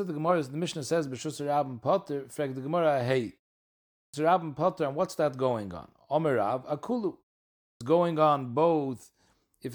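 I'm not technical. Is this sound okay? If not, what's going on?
No. There is a clipped start after a pause at 4.0 s and at 7.69 s. The playback device dozes off during each short silence and wakes too slowly, so the first 135 ms and 116 ms of speech are cut, and the words begin abruptly.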